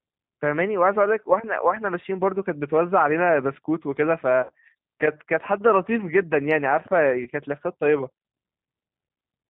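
Throughout, the speech carries plainly audible G.729 codec damage. The decoder rebuilds each short frame from a vocal tract filter, a pitch predictor and a few pulses, at a rate that fits 8 kbit/s. Nothing above 4 kHz survives, and voiced sounds turn slightly rough and synthetic. Unlike plain low-pass filtering, the roughness is built into the speech itself.

At 4.43 to 4.53 s, and again at 7.23 to 7.30 s, VoIP packet loss concealed by the speech codec takes over. About 60 ms and then 30 ms of audio go missing, which fits two packets and then one. The decoder extends its last pitch and filter with falling gain, so each gap becomes a buzzy tone or coloured noise that fades, rather than silence or a click. The speech stays weak briefly after each gap.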